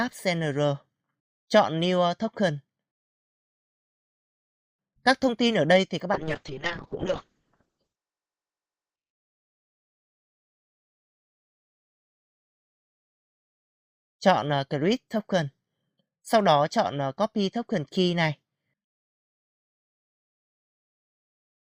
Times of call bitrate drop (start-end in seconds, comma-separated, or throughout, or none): 6.15-9.19